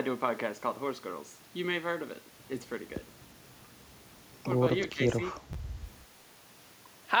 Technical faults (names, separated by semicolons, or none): speech suppressed in double talk; chunks out of order